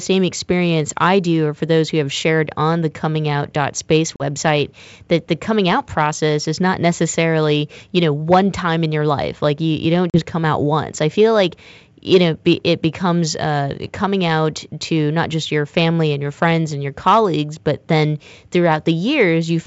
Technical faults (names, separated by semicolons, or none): packet loss on an ADPCM call